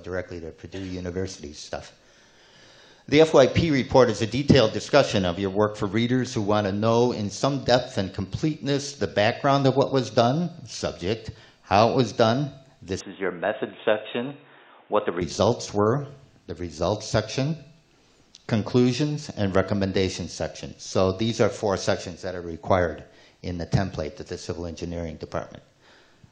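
From 13.0 to 15.2 s the audio turns dull and boxy, with everything above 3.8 kHz suddenly gone, then returns to full bandwidth. The switch has no gap and no real jump in level, but a faint new noise floor sits far below the signal. This is likely the input switched to a poorer device, such as a headset's call profile. On a spectrogram the upper band is sharply cut off across that stretch, while the waveform's envelope stays unchanged.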